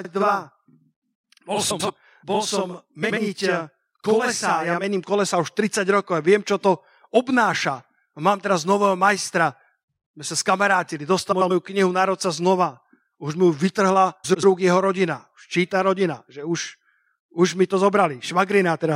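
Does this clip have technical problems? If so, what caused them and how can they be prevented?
Yes, two kinds of fault. From 0 to 4.84 s there's a channel delay doubling: one channel lags by about 46 ms, which fits a 2048-sample buffer, so the mono sum gives a slap-like double. Keep both channels on the same buffer path and check alignment before summing to mono.

There are also frames out of order at 1.70–1.90 s, 3.02–3.18 s, 11.32–11.51 s (between "my sa skamarátili" and "knihu národca"), and 14.24–14.44 s (just before "rúk jeho rodina"). Adjacent blocks of about 70 to 93 ms swap places, giving a garbled flutter. Reorder packets by sequence number in the jitter buffer before decoding.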